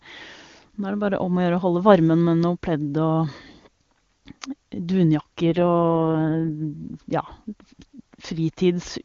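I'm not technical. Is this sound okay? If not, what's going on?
No. From 5.50 to 6.51 s there is an AMR rate drop: the phone network briefly forced the HD Voice speech codec into a much thriftier mode, likely because of a weak radio link, so the speech turns rough and synthetic for about a second before clearing again.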